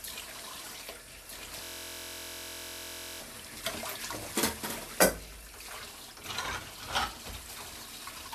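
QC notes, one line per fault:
1.25–4.99 s, doubled audio track: a second full-band copy about 5 dB quieter trails roughly 1.5 s behind with no decay, likely from a slower capture path.
1.64–3.20 s, system hang loop: one 23.22 ms piece repeats exactly, many times over, as the hardware keeps cycling its buffer, giving a steady 43.1 Hz buzz that fits a 1024-sample buffer.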